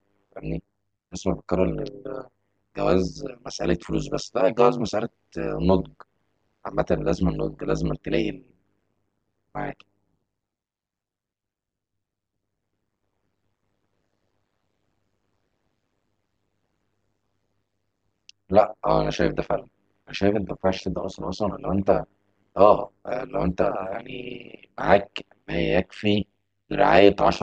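From start to finish the speech carries overlap-add ripple: the audio was split into windowed frames and rejoined with an overlap whose windows do not add up to a steady gain, so the level dips and recovers once per frame, around 100 times a second. The swing is deep, about 60 dB, giving a harsh, metallic buzz. A waveform shows a regular comb of amplitude notches, and a spectrogram shows evenly spaced vertical striations across all frequencies.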